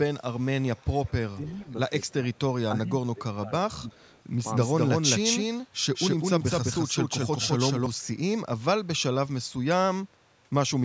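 An echo canceller at the far end, likely with its device on loudspeaker, is letting part of its microphone pickup return, so an echo leak trails the speech by 310 ms from 0.35 to 1.12 s. It is faint, around 30 dB below the direct voice, and heard as a delayed shadow of the syllables. At 1.36 to 1.66 s, both sides talking at once likely confused the canceller, and it applied speech suppressed in double talk: the voice briefly dips by up to about 10 dB in short patches adding up to roughly a twentieth of a second. The same 310 ms echo returns at 1.46 to 1.72 s and, slightly weaker at around 35 dB down, at 2.08 to 2.39 s. From 2.73 to 3.97 s the suppression is heavier, with the voice sinking by as much as about 20 dB and dropping out in pieces over roughly 0.7 s. Echo follows again from 3.97 to 4.23 s. Between 4.46 and 7.86 s a doubled audio track appears, likely from a second, slower capture path or an edit leaving two copies out of step. 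A full-band copy at about equal level runs roughly 200 ms behind the original, giving a dry, slap-like repeat with no room colour that switches on and off abruptly at those edges. A last faint echo, around 40 dB down, surfaces at 10.21 to 10.34 s.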